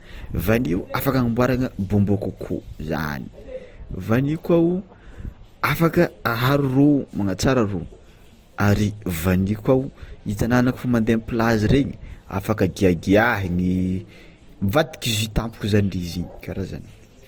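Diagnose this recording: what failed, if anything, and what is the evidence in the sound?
Codec stage, throughout the speech: two layers of compression artefacts overlap, likely transcoding between lossy codecs, fitting MP3 then Opus. The spectrogram shows nothing above 20.1 kHz.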